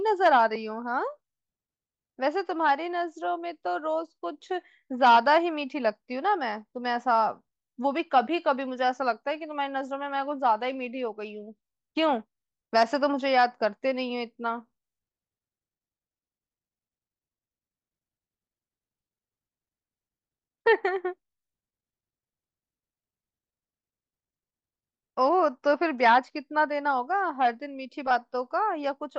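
A speech clip with a Bluetooth SBC bit pool drop from 10.17 to 11.63 s: the treble goes dull and gritty, which fits the bit pool halving from 28 to 14, near 108 kbps.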